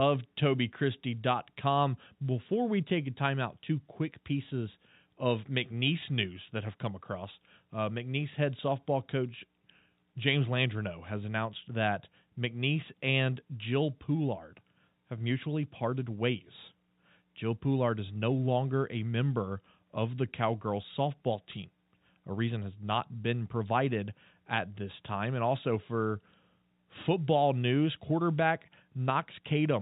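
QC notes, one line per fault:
No faults found in the speech, which carries the expected G.711 A-law telephone band with nothing above 4 kHz.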